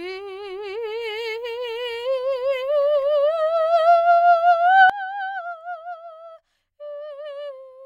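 Sudden gain jump at 4.90 s: the music drops about 19 dB at once and stays there, likely a gain change applied without a ramp.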